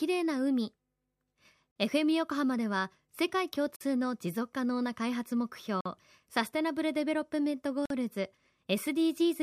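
Gap between chunks: the speech plays as 2-second chunks with silence inserted at each join, leaving abrupt 48 ms holes at 1.71, 3.76, 5.81 and 7.86 s.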